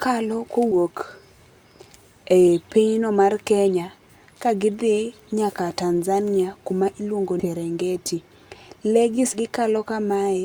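At 0.71 to 0.75 s, 7.39 to 7.45 s and 9.33 to 9.38 s, the speech jumps forward. These are compressed frames skipped. Whole coded frames never reach the output, either lost from the file or rejected by the decoder as damaged. Roughly 150, 200 and then 300 ms of speech vanish, which fits losing several 20 ms codec frames each time. Each join sounds like an abrupt jump ahead in the speech.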